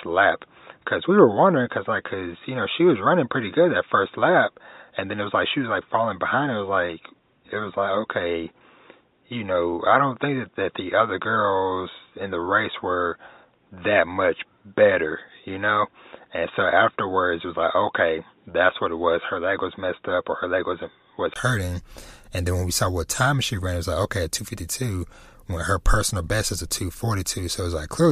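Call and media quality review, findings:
Dull, boxy speech from 0.0 to 21.36 s, nothing above 3.8 kHz. Brief gap, about 20 ms, at 21.36 s, then full band returns. Level unchanged, faint added noise. Likely input switched to a poorer device, narrowband headset or mic path.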